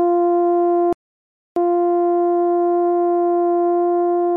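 At 0.93 s the music cuts out in mid-flow and stays silent for about 0.64 s before resuming at 1.56 s. This is a playback stall, most likely the player running short of data or its thread being blocked until output recovered.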